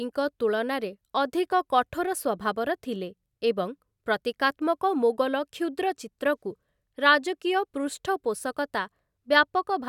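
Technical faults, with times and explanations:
No technical faults can be heard in this speech.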